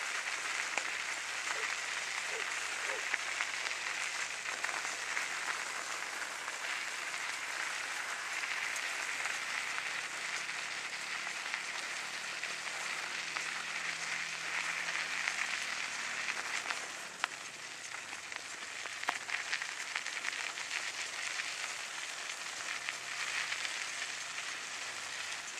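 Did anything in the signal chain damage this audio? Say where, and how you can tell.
No, nothing in the chain damaged it.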